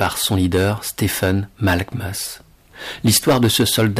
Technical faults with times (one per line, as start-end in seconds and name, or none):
0.00-4.00 hard clipping